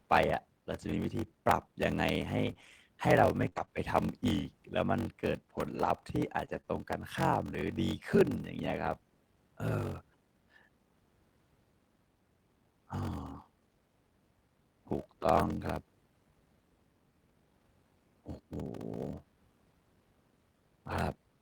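Throughout, a block size mismatch (padded) means one stage hands over shorter blocks than the next stage reads, probably about 880 samples into 1024, with zeros filling the remainder. Every block carries a tiny silence, producing a steady 46.9 Hz buzz, and the speech runs at 0.861 times normal speed with near-normal pitch.

From 0.81 to 3.69 s, scattered short gaps appear. Roughly four packets go missing or arrive late, the longest hole about 30 ms. The receiver stretches the preceding sound across each hole, so the speech stays clear but picks up brief ticks and smeared hiccups.

From 5.57 to 8.51 s, the same scattered short gaps return. Roughly three holes, none longer than about 20 ms, are patched by continuing the last sound. The result is a few quick ticks and small smears scattered through the speech rather than audible dropouts.

From 15.37 to 15.55 s, a lost packet is rebuilt from error correction. 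Five separate packets were lost, and the decoder substitutes low-bitrate copies carried in the following packets, covering 100 ms without a gap. That stretch sounds rougher and noisier than its surroundings.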